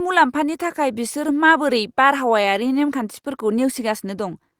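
The clip is speech with one short concealed packet loss between 2.41 and 2.45 s. About 20 ms of audio never arrived in time. The receiver covered the gap by extending the preceding sound, from its pitch if voiced or as shaped noise if not. It then crossfaded back into the real signal. Listeners hear a brief smear or wobble.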